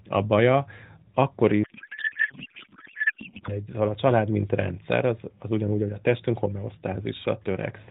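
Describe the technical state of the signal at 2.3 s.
At 2.3 s there is a codec payload misread, from 1.64 to 3.52 s, just after "a baja akkor". The speech turns into garbled noise and warble that barely tracks it. This fits octet-aligned AMR frames being unpacked as bandwidth-efficient, putting every field in the wrong place.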